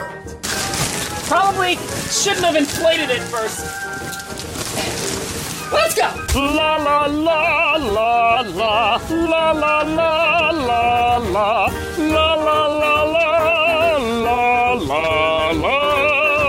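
From 0.85 to 2.35 s, and again from 8.37 to 9.26 s, the sound jumps about 6.2% faster and 103 cents sharp, then drops back to normal. This is a drift correction step, likely from clock-matching software changing the playback rate in one jump to rebalance its buffer. Unlike wow or flutter, the pitch doesn't wobble: it holds flat about a semitone high, and both onset and return are abrupt.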